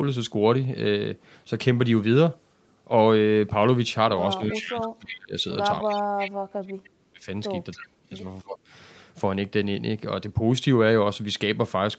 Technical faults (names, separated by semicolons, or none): speech suppressed in double talk; echo leak